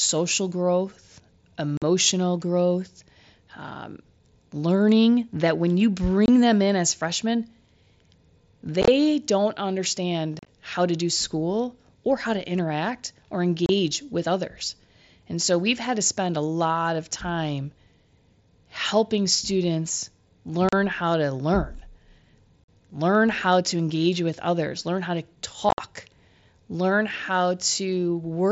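Unconcealed Bluetooth headset packet loss: short voice packets between headset and phone were lost and replaced by silence. This leaves abrupt holes in the speech at the following points:

1.77 s, just before "growth um learning that"
6.26 s
8.82 s
10.39 s
13.66 s, between "how to interact or" and "with others"
20.69 s
22.64 s
25.69 s, after "others learn how to"

The holes remove 22.5 to 75 ms of sound each. At 8.82, 10.39 and 25.69 s the losses are scattered over 60 to 90 ms, so they sound like a brief rough crackle.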